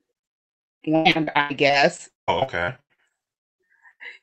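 From 0.95 to 4.02 s, repeated packet loss leaves about 25 gaps, gaps of up to 190 ms, patched by stretching prior sound, so the speech turns choppy and robotic.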